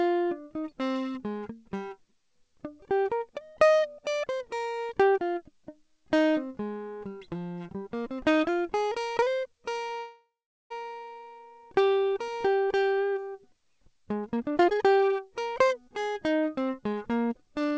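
Call audio freeze, 9.98 to 10.72 s: the music stops moving forward and the last sound is drawn out into a fading buzz, which sinks to silence for roughly 0.41 s before playback resumes. The likely cause is a stall in packet delivery that drained the jitter buffer. The 0.72 s hole is filled with this synthetic tail and nothing is skipped, so everything after it arrives about 0.72 s late. Throughout, the G.722 call path cuts everything above 8 kHz.

Jitter buffer speed-up, 14.36 to 14.86 s and 16.78 to 17.72 s: after the delay builds up, the receiver shortens its backlog by repeatedly cutting out pitch-period-sized slivers of audio. In the first stretch the music races ahead at 180% speed, squeezing out around 0.4 s. In the second stretch the speed-up is gentler, 108%, and trims about a tenth of a second. Pitch stays unchanged, but the tempo lurches forward unevenly.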